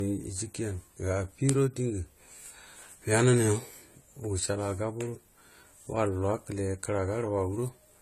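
The speech was likely encoded first at a very low bitrate, in the range of a 32 kbit/s AAC stream, and then saved again as a high-bitrate MP3: a case of low-bitrate audio saved at a high bitrate. The second encoding could not restore what the first removed, so from start to finish nothing remains above 14 kHz, and the dull texture and artefacts of the original compression carry through unchanged despite the larger file.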